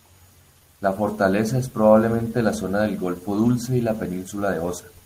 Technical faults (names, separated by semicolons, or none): lost packet rebuilt from error correction